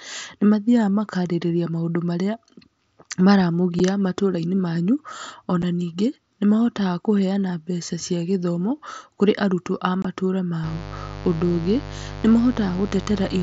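At 3.79 s, just before "matũrainĩ manyu", and at 5.62 s, before "ningĩ nĩ", unconcealed Bluetooth headset packet loss drops about 7.5 ms of audio, consistent with one lost packet. Each leaves a tiny abrupt gap. A longer 22.5 ms hole follows at 10.02–10.05 s. The wideband mSBC link carries the rest with light codec damage. From 10.64 s to the end, 50 Hz mains buzz from switching spikes adds a steady, raspy buzz roughly 10 dB below the speech.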